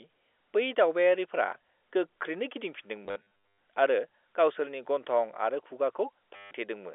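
Around 3.04 to 3.26 s, and again at 6.36 to 6.51 s, packet loss with the last packet repeated gives a robotic stutter buzzing near 100 Hz, which fits 10 ms packets.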